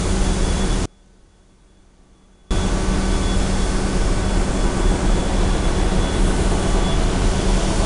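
4-bit ADPCM compression runs throughout: each sample is coded as a coarse step from a prediction, leaving gritty, level-following hiss on loud sounds and nothing above 10.6 kHz.

Audio dropout to a faint residue from 0.86 to 2.51 s: the sound cuts abruptly for 1.65 s, leaving only a faint trace roughly 30 dB down, likely a lost input while the downstream path stayed live.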